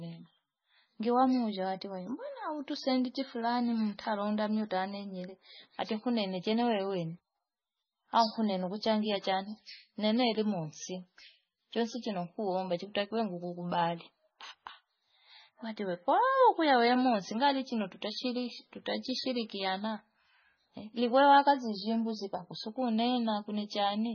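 Speech runs throughout with heavy, watery swirling and metallic chirps on s sounds, attacks smeared, and nothing above 6.6 kHz. This is likely MP3 compression at a very low bitrate, around 17 kbps, where weak frequency lines flicker on and off between frames.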